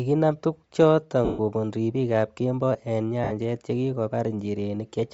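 Bluetooth LC3 compression runs through the whole speech recording, giving the voice a breathy, grainy edge where the upper spectrum has been thinned out and filled with noise. The damage is plainly audible and is likely from LC3 at a low rate, which fits 32 kbps with 10 ms frames. Lost LE Audio frames cause two dropouts: 1.25 to 1.39 s, about 140 ms, just before "kobun ripikab kemboi eng", and 3.24 to 3.32 s, about 70 ms, just after that same phrase. In each gap the decoder repeats the last spectrum with scrambled signs, so the sound smears into noise and fades, which fits roughly fourteen and then seven missing frames.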